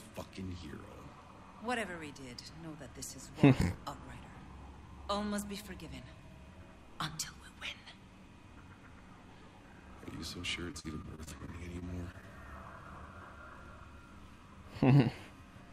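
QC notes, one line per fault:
10.71–12.24 s, repeated packet loss (robotic sound): about ten dropouts, the longest 44 ms, each patched by stretching the preceding sound, giving a choppy texture with pieces missing. Spectrograms show repeated smeared, flattened columns and brief gaps; the waveform shows periodic repeated cycles.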